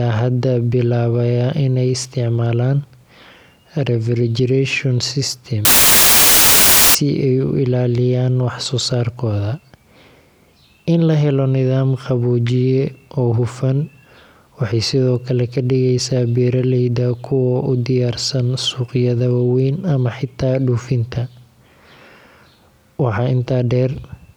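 From 5.65 to 6.95 s, a wrong sample width, fitting 32-bit samples read as packed 24-bit, turns the speech into loud noise, slowed to 0.75 speed.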